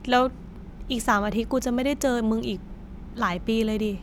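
Nothing in this bit of speech stands out as a technical fault; it just runs along without any glitch worth pointing to.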